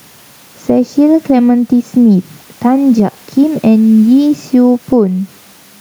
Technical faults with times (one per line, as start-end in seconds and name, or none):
0.00-5.81 gain pumping